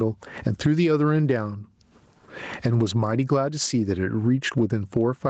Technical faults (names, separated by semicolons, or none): gain pumping